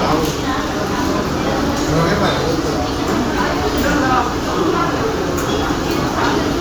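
Nothing technically wrong turns up in this recording of sounds; it's all there and nothing gets in the way of hearing it.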